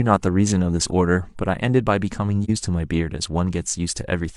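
A speech recording with one dropout from 2.44 to 2.50 s, an AAC frame loss with muting: the decoder zeroed a lost stretch of roughly 43 ms, consistent with a single frame, and overlapping windows fade the sound down and back up. A spectrogram shows a brief, soft-edged vertical gap across all frequencies, and the waveform dips briefly and returns.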